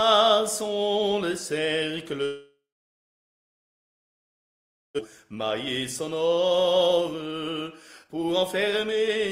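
From 2.25 to 5.01 s the sound stalls into a fading buzz, then silence, and resumes with about 1.4 s missing: likely a long network dropout, with the receiver concealing the gap.

Afterwards the audio sounds hurried at unchanged pitch, briefly at 109% speed from 5.09 to 5.44 s, then at 123% from 6.01 to 9.2 s. This is a jitter buffer speed-up: short pitch-period pieces are repeatedly cut, trimming roughly 0.7 s of built-up delay.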